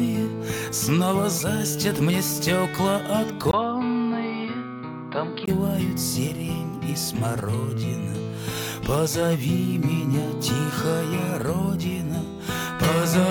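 Input switched to a poorer device, from 3.51 to 5.48 s: after a 20 ms gap, the sound turns dull and a little quieter, with nothing above 4.9 kHz and a faint new background noise, likely because recording moved to another microphone or headset profile before switching back.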